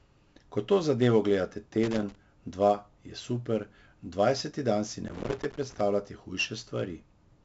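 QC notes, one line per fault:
Throughout: 4-bit ADPCM compression. Each sample is stored as a coarse 4-bit step from a prediction. The error follows the signal level, so a gritty hiss follows every loud sound, and sharp onsets distort where the step size cannot grow fast enough. Nothing is heard above 7.7 kHz, which points to a 16 kHz sample rate and fits a 64 kbps stream.
1.83–2.15 s and 5.07–5.81 s: loose connector crackle. Irregular bursts of crackle and scratching break into the speech. The first comes after "to zadevo gledate" and clears before "dva je super dvajseti". The second follows "super dvajseti dan si". A contact makes and breaks rapidly, chopping the signal, and any DC on the line adds pops.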